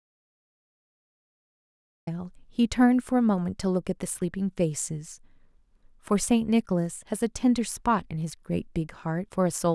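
The input signal was likely lost or muted before the clip began, so the recorder wrote silence: an audio dropout to silence. This speech clip opens in complete silence with no room tone until 2.07 s, when sound enters abruptly mid-flow.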